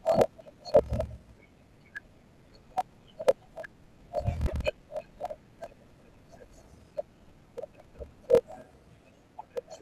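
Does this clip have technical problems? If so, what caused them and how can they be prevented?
Yes. Throughout the speech there is a block size mismatch (padded): one stage hands over blocks that fit 1024 samples while the next reads about 1152, and zeros fill each remainder. That leaves a short silent gap in every block, heard as a steady 41.7 Hz buzz, and the audio runs at 0.889 times normal speed with its timbre intact. On a waveform the gaps appear as regular flat lines about every 24 ms; a spectrogram shows evenly spaced vertical stripes. Matching block sizes at the interface between the two stages, or buffering properly between them, prevents it.

From 4.42 to 4.53 s there is damaged data in a compressed stream. Corrupted bytes make the decoder misread or reject frames there and lose sync until it finds a valid frame header again, giving a brief disturbance in the speech. The spectrogram shows a disrupted patch lasting about 110 ms, and the waveform breaks abruptly at both edges. 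Checksummed transport, error-resilient containers and verified file transfers prevent this.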